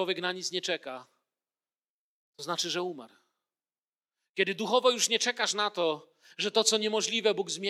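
Nothing is technically wrong with this speech recording.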